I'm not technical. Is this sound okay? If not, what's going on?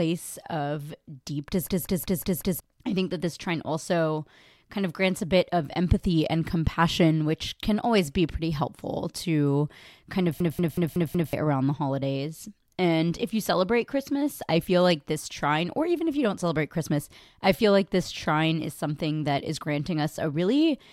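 No. Twice, the computer briefly froze while the sound hardware kept replaying the last chunk of audio it held. This is a system hang loop. From 1.67 to 2.60 s and again from 10.40 to 11.33 s, the same snippet of speech, just under a fifth of a second long, repeats five times, about five times per second. You hear a machine-gun stutter, and roughly a second of the real speech is lost each time.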